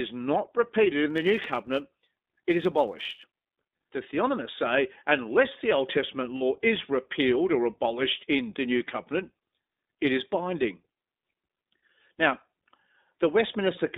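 Throughout, the speech is confined to a narrow telephone band of roughly 250 Hz to 3.7 kHz and has a slightly rough, synthetic edge. That is iLBC codec damage: each 20 ms frame's excitation is coded independently at 15.2 kbps, which audibly coarsens the voice.

From 1.09 to 3.40 s, just after "not repeated", a steady buzz near 92 Hz rides over the speech, though the pace stays normal. This is a block size mismatch (truncated): one stage writes longer blocks than the next reads, and the cut where each block's tail is discarded recurs at about 92 Hz, once every 10.9 ms.

At 6.37 to 6.43 s, just before "is repealed or abolished", there is a brief held, buzzy vowel-like sound lasting about 40 ms, which fits two lost iLBC frames. The decoder filled the gap by repeating the last pitch cycle with added noise. Because iLBC frames stand alone, the voice recovers almost at once.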